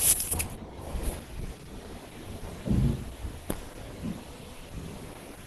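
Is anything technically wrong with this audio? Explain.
Yes, there is a problem. Opus compression runs throughout the speech: nothing above 12.1 kHz, and a hoarse, grainy roughness rather than MP3-style swirling, likely from hybrid mode at around 16 kbps.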